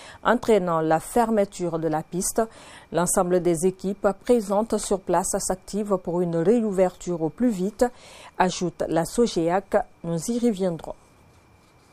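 No technical faults can be heard at any point in the audio.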